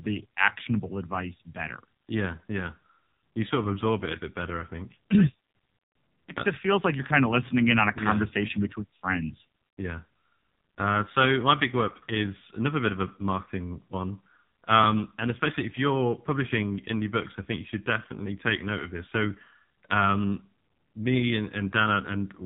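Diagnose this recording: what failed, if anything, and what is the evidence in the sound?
The codec stage is the culprit throughout: the AMR narrowband mobile codec. Nothing above 4 kHz survives, and the speech has that heavy buzzy, synthetic edge you get from the vocal-tract model starved of bits, which fits one of the low AMR-NB modes around 5.9 kbps.

There's also a spot of lost AMR speech frames from the radio side, at 13.44 to 13.48 s, right after "another bit of a" and before "one um and especially". You get a brief dip or warble as the decoder reuses the last pitch and vocal-tract settings at reduced gain. It sounds like a single dropped 20 ms frame.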